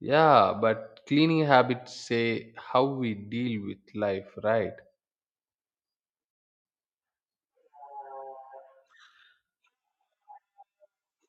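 At 6.31 s the speech stops dead, and silence holds until 6.65 s. This is a rebuffering stall. The player used up the audio it had downloaded and had to wait for more to arrive. The gap adds about 0.34 s to the running time. When the sound returns, it picks up exactly where it broke off. Nothing is skipped or repeated. The result is a clean, abrupt pause in the middle of the flow.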